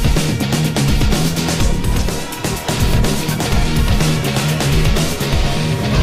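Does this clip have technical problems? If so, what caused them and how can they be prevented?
No, there's nothing here that calls for a technical diagnosis or any preventive action.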